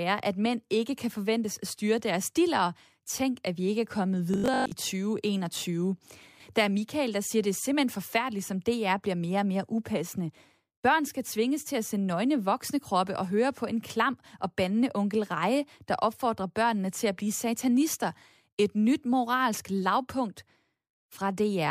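From 4.34 to 4.72 s, just after "vi ikke er kommet", the speech takes on a robotic sound from repeated short buffers. Fresh audio stopped arriving in time, and the likely cause is playback filling the gaps by looping the last chunk, here about 20 ms, while the real signal was dropped. Most of that stretch is repeated material, so the voice collapses into a rigid, metallic 50 Hz buzz that only loosely tracks the speech.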